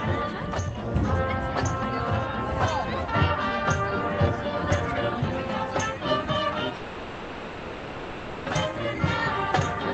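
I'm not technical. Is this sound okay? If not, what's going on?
No. From 6.75 to 8.48 s there's a call audio freeze: the sound stalls into a fading buzz or hiss, likely from delayed network data, then resumes exactly where it stopped, with nothing lost.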